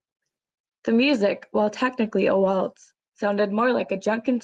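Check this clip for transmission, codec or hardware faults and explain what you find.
No transmission, codec or hardware faults can be heard in this speech clip. It carries the expected character of a call codec path, with the top of the spectrum rolled off at around 12 kHz.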